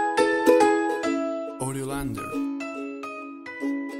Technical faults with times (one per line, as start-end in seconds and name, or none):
none